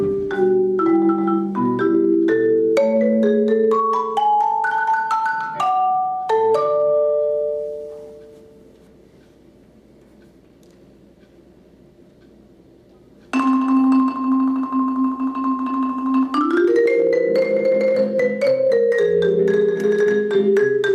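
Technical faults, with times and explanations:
No technical faults can be heard anywhere in this audio.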